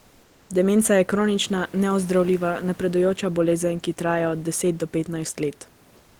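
From 0.00 to 0.49 s, before the speech begins, the background is a flat, textureless hiss about 2 dB quieter than the real room noise heard under the speech. The same thing happens again from 5.97 to 6.20 s, where it is about 3 dB quieter. This is comfort noise in place of the background. The likely cause is discontinuous transmission, pointing to Opus DTX: with no speech detected, the sender stopped sending, and the receiver filled those gaps with synthetic noise.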